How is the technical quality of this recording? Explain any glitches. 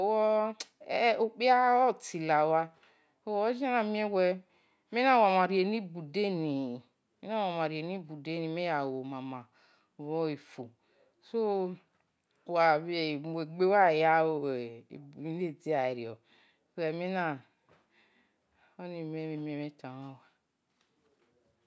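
The recording is technically sound, with a continuous, steady signal and nothing in it that needs explaining.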